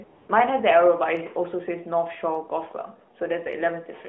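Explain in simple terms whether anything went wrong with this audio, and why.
AMR comfort noise, from 0.04 to 0.28 s: at the very start, the phone judged the line silent and sent no speech for about a quarter of a second. The receiving end filled that gap with smooth, made-up hiss in place of the real background, so the room sound briefly changes character.

Word clock ticks, between 1.17 and 3.53 s: about three sharp ticks, roughly one each second. Two pieces of digital equipment were running on slightly different clocks, and each time they drifted a single sample apart, one sample was lost or doubled. That tiny jump is what clicks. The speech itself comes through the phone-band mobile codec with its usual muffled, narrow top end.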